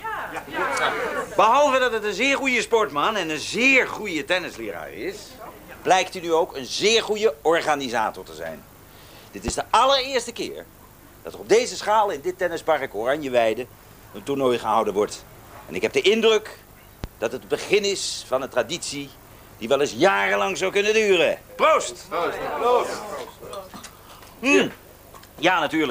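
At 9.48–9.51 s and again at 17.04–17.07 s, a single loud pop cuts through, peaking roughly 10 dB above the surrounding sound, which continues underneath. Each is likely a brief voltage pulse from a switch, plug, static discharge or driver glitch.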